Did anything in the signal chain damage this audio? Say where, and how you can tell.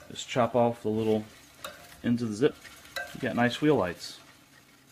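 Yes. In the network or at the jitter buffer, about a second of audio was dropped at 2.51 to 2.53 s in a skip ahead, so playback jumps forward with no gap.

Then a jitter buffer speed-up from 2.62 to 4.88 s trimmed pitch periods to shed roughly 0.4 s of delay. The sound runs at 117% speed, hurried but unchanged in pitch.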